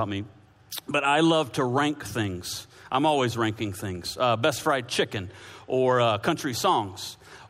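Nothing stood out as a technical problem on listening to this recording.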